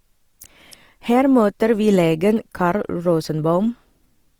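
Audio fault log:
Throughout, Opus compression: the speech sounds grainy and rough, with a noisy texture in place of clean harmonics, and this damage is plainly audible. The likely cause is Opus in its CELT music mode at a low rate, which fits about 24 kbps. It keeps each band's energy but fills bands with folded or noise content. On a spectrogram, harmonics look smeared and speckled, though the band stays full, with nothing above 20.4 kHz.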